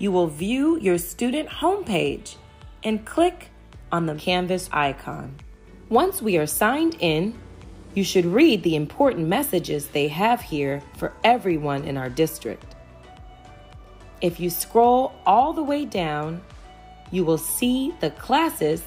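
No technical faults can be heard anywhere in the audio. There is no point in the sound that stands out as going wrong.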